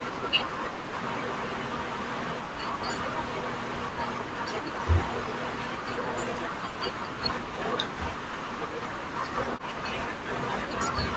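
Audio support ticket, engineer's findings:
Echo canceller likely misjudging double talk, treating near-end speech as loudspeaker echo and suppressing it. Result: speech suppressed in double talk, dropping by roughly 40 dB or cutting out in pieces at 0.00–0.51 s, 0.81–1.17 s, 1.57–2.65 s and 8.10–9.22 s.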